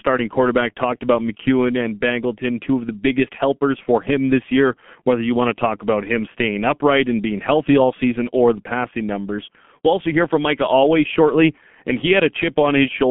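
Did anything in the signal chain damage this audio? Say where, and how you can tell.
Yes. The damage comes from the codec stage and runs through the whole clip. The speech sounds muffled and hoarse, with smeared consonants and a band that starts around 150 Hz and rolls off near 3.4 kHz, leaving nothing above 3.8 kHz. The heavy, hoarse texture points to G.723.1 coding at a bitrate near 6 kbit/s. It builds each 30 ms frame from a coarse voice model that updates too slowly to follow quick articulation.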